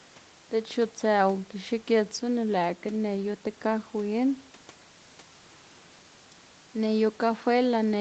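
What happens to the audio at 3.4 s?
At 3.4 s the speech runs on intact, with no dropout, glitch or distortion, only the room noise well below it and the upper limit of about 8 kHz that the call path sets throughout.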